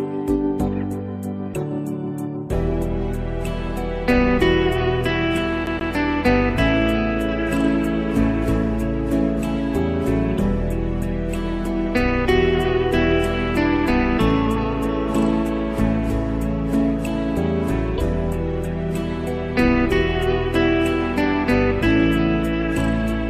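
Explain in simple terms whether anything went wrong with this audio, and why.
Something did go wrong, briefly. From 5.66 to 5.93 s there's a CD stuck on one turn: a scratch keeps knocking the laser back, so the same 131 ms snippet plays twice, with a tiny gap at each jump. That's the quick, even stutter you hear.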